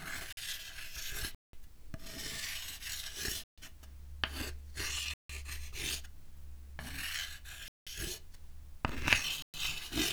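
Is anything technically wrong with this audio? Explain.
Yes. The sound cuts abruptly to dead silence and back at 0.33, 1.35, 3.44, 5.14, 7.68 and 9.42 s, for 46 to 186 ms each. These are blocks of digital silence: stretches of samples replaced by zeros, likely because the output buffer went unfilled in time. The 46 ms and 186 ms gaps fit buffers of 2048 and 8192 samples.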